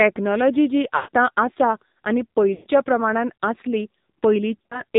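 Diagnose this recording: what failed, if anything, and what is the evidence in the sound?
AMR narrowband mobile codec, throughout, at the codec stage: nothing passes above 4 kHz and the speech sounds buzzy and synthetic, which fits a low mode around 7.4 kbps.

Lost AMR speech frames, at 0.96–1.09 s before "आसा आनी", at 2.54–2.68 s after "आसा आनी", and scattered across 4.59–4.82 s. This is a radio-link fault. The decoder repeated stale pitch settings with falling gain, so the sound smears and fades.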